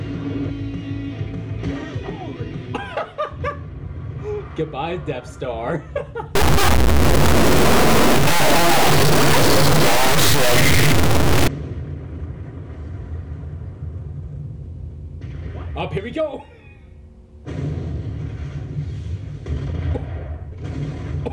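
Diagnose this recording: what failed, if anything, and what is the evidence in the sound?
From 6.35 s to 11.48 s the sound turns harsh and buzzy, and quiet gaps fill with loud noise. The likely cause is a stuck bit at the converter or its data lines: one high bit held fixed throws about half the samples off by a large step, around -10 dBFS.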